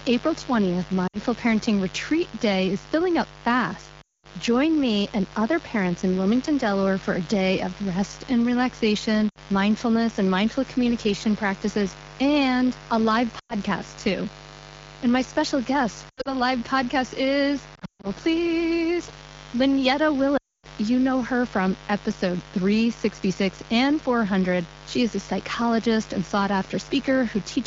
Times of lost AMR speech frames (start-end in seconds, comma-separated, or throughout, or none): 1.07-1.19, 4.01-4.35, 9.30-9.38, 13.39-13.55, 16.09-16.29, 17.75-18.07, 20.37-20.68